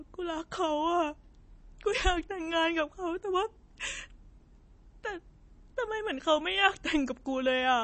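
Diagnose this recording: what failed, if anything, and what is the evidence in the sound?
The codec stage failed, most likely through MP3 compression starved of bits, which fits an encode around 32 kbps. Throughout the speech nothing survives above 8.3 kHz, and weak high components flicker between frames, giving plainly audible watery, swirling artefacts and smeared onsets.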